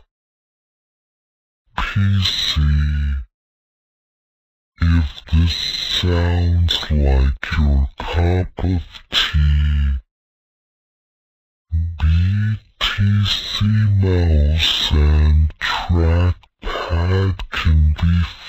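Throughout, the sound runs at half speed and an octave low, a stereo-read-as-mono fault: interleaved left and right samples were played back as one channel.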